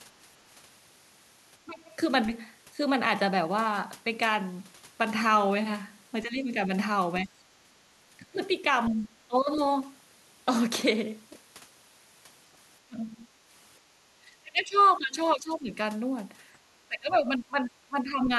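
From 1.65 to 1.89 s the talker's speech dips by around 20 dB, a speech suppressed in double talk event. The likely cause is an echo canceller that could not tell the near talker from loudspeaker echo while both sides spoke, so it pulled everything down. It sounds like the voice briefly sinking away. On a waveform the envelope narrows sharply, and a spectrogram shows the energy thinning, with the upper bands fading.

The same suppression returns from 6.23 to 9.6 s, with a shallower dip of roughly 15 dB spread over about a second in total, and again from 12.85 to 15.77 s, where gaps totalling around a second and a half fall to about 20 dB down. The speech turns choppy and dull there, and the spectrogram shows ragged gaps and missing high-frequency detail.

Inside that stretch, from 14.78 to 14.84 s, a faint scrap of the other side's voice leaking through appears, very low at roughly 35 dB under the talker. 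It is likely residual loudspeaker echo that the canceller failed to remove. It is heard as a brief ghost of a second voice and shows up as a faint, short smear of unrelated harmonic lines.

The last suppression runs from 16.88 to 18.3 s, with dips of about 20 dB totalling around a second and a half. The voice again drops out in pieces, and the waveform shows the same clipped-back envelope.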